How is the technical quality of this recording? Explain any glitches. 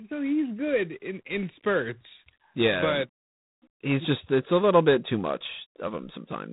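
The recording has poor technical quality because of one fault that runs through the entire speech clip: heavy G.726 ADPCM coding.

G.726 ADPCM damage is plainly audible from start to finish. The codec sends only a few bits per sample, each describing how far the signal strays from an adaptive prediction. Here the coarseness fits the 24 kbit/s mode, which uses 3 bits a sample. The quantisation error becomes a harsh, rasping hiss that swells and fades with the speech level. On a spectrogram, energy stops sharply at about 3.8 kHz, and grainy noise fills the gaps between harmonics wherever speech is loud. In the waveform, that noise rides on the signal and scales with its amplitude.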